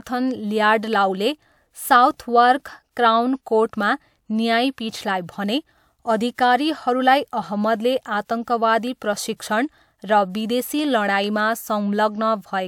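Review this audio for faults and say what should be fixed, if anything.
Nothing here needs fixing, as no technical faults turn up anywhere in the recording.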